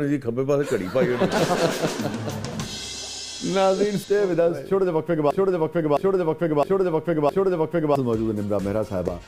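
From 5.31 to 7.96 s, a broken-record loop: one 0.66 s fragment repeats four times, likely from a stalled player, appearing as identical tiled blocks on the waveform.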